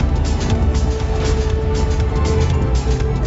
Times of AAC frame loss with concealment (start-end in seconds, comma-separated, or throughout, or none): none